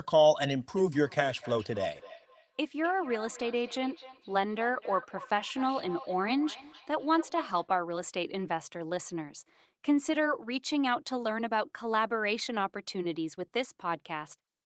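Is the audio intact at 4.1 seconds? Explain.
No. At 4.1 seconds the speech is inside a feedback echo between two devices, running from 0.77 to 7.72 s. Another device's playback reaches the microphone again, so each sound returns about every third of a second, up to about 16 dB below the speech, thinner and ringing. A spectrogram shows evenly spaced, fading copies of each syllable, and the waveform shows smeared decaying tails.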